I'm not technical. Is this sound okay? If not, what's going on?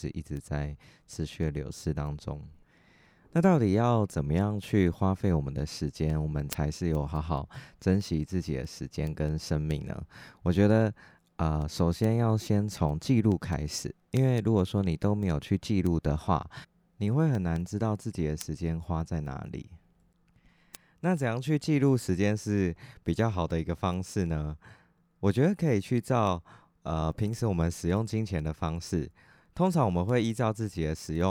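No. From about 0.16 s to 31.15 s there's a steady tick, roughly five a second. That's word clock ticks: two pieces of digital gear running on slightly different clocks, so a single sample gets dropped or doubled each time they drift past each other.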